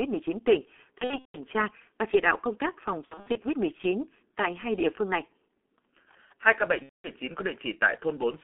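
G.723.1 codec damage runs throughout: at about 6.3 kbit/s, this 30 ms frame codec keeps only roughly 250 Hz to 3.5 kHz and tracks the voice coarsely, so the speech is muffled and hoarse, with smeared consonants.

VoIP packet loss concealed by the speech codec hits 0.98 to 1.38 s before "tra và chỉ đạo", 3.05 to 3.38 s after "đạo công tác phòng", and 6.83 to 7.09 s after "ca bệnh". Each gap, roughly 180 to 240 ms of missing audio, is filled by extrapolating from the last pitch and filter, with the sound fading.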